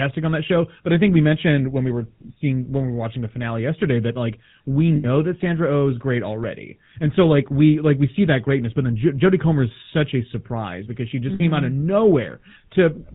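A buzzy, gravelly roughness runs through this whole speech clip, with a dull top end and nothing above 4 kHz. That sound is the GSM full-rate codec, and it fits its 13 kbps rate. The codec keeps only a coarse model of the vocal tract and excites it with evenly spaced pulses that carry just one sample in three, so the fine detail of the voice is replaced by that grainy buzz. The damage is plainly audible throughout. Twice the sound freezes into a brief rough, metallic ring. The first ring runs from 4.96 to 5.05 s, right after "yesterday that like we". The second runs from 11.34 to 11.41 s, between "surprise because she just" and "came out". These are lost GSM frames. When frames went missing, the decoder kept reusing the last good frame's settings, so the rough tone hangs on instead of the speech. The 80 ms and 60 ms gaps point to about four and three dropped frames.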